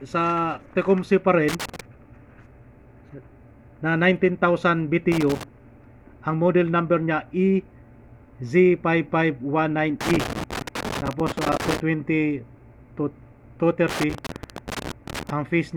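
Loose connector crackle hits at 1.49–1.81 s, 5.12–5.43 s, 10.0–11.8 s and 13.9–15.3 s: a dodgy contact chopping the signal into scratchy, irregular bursts.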